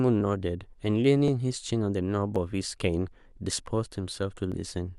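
Two independent clocks likely drift apart by about a tenth of a percent, causing clock drift buffer slips that click the speech roughly every 1.08 s from 0.21 to 4.5 s.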